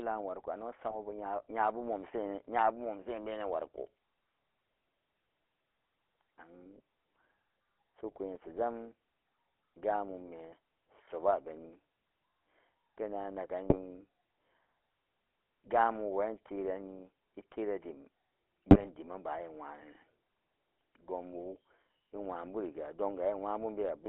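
GSM full-rate codec coding runs through the whole speech clip. The codec rebuilds the voice from a vocal-tract filter driven by a coarse, regularly spaced pulse excitation, so voicing comes out buzzy and gravelly, and the damage is plainly audible. The band is held to roughly 300 Hz to 3.4 kHz, which takes away low body and upper brightness, and the character fits the 13 kbps full-rate scheme.

GSM bit errors break in at 0.88 to 0.97 s, again at 13.69 to 13.79 s, and at 18.70 to 18.88 s, the longest burst. Corrupted bits reached the decoder and scrambled the filter, pitch and gain values for four, three and nine consecutive frames respectively. The spectrum twists and the level lurches, so the voice briefly squawks, pops and gargles before normal decoding resumes.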